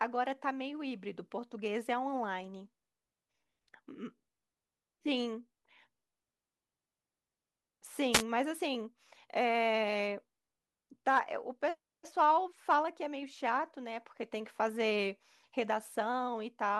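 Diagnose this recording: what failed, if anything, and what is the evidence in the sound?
A short swish of static breaks over the speech from 8.12 to 8.23 s, about a tenth of a second. This is a wireless microphone noise hit in the analogue radio link: reflections briefly cancelled the FM signal, so receiver noise rose.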